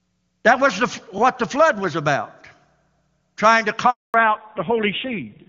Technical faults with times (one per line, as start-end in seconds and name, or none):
1.18-1.20 overlapping chunks
3.90-4.14 handover gap
4.14-5.49 fallback to narrowband